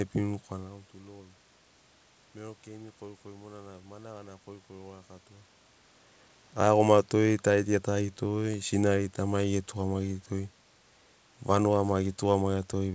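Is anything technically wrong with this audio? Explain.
No, the speech carries the expected traits of a G.722 call path, with nothing above 8 kHz and the lowest bass removed by the microphone processing, room noise sitting about 40 dB below the voice, and level shifts near 0.5 s and 5.5 s that come from the talker moving relative to the microphone, not from the system.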